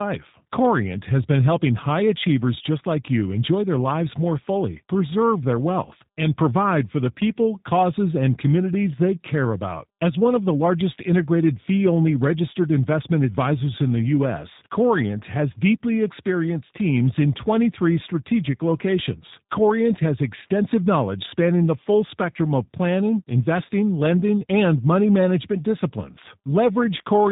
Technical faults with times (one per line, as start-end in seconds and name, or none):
0.00-27.32 tandem speech coding